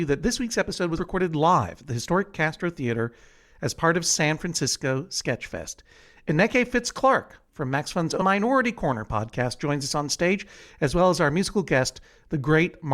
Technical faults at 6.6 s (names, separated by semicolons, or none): none